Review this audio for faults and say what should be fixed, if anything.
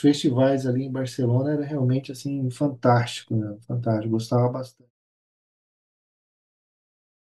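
Nothing to fix: the speech carries no faults, and the smooth fade-out from around 4 s down to silence at 4.91 s is a deliberate edit, not an error.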